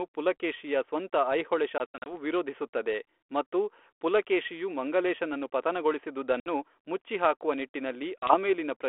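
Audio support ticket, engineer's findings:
Packet loss on an ADPCM call at 1.78–2.14 s, 6.40–6.47 s and 8.19–8.35 s. Hard silent holes: 160 ms lost across about 280 ms (longest 80 ms), then 60 ms, then 40 ms. Unlike a plain dropout, speech resumes slightly distorted. The decoder's predictor and step size desynchronised from the sender's and need tens of milliseconds to settle. The G.726 link is 32 kbit/s, 300 Hz to 3.4 kHz.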